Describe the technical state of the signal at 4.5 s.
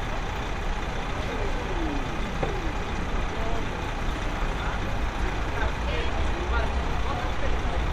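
At 4.5 s the signal is inside a frames out of order fault, 4.40 to 4.77 s: two adjacent blocks of about 170 ms each, which fits runs of four frames, were decoded in swapped order. The stretch plays as a garbled flutter, and no time is lost.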